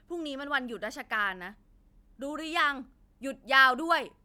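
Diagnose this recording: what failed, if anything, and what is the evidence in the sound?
Nothing in the signal chain failed: the speech signal is continuous and intact, with no audible disturbance at any stage from capture to playback.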